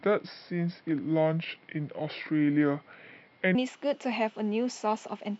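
From 0.00 to 3.55 s the speech plays as a section at the wrong speed, running at 0.725 times its proper rate, so it drops about five semitones and drags, sounding deep and sluggish until normal speed returns. The likely cause is a clock or sample-rate mismatch when that stretch was played back or edited. Unlike a pure pitch shift or time-stretch, pitch and tempo fall together here, with the voice's timbre darkening along with the pacing.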